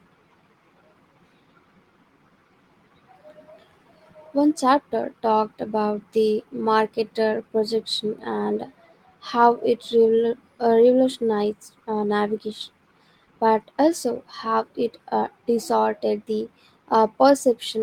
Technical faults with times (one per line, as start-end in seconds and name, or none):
none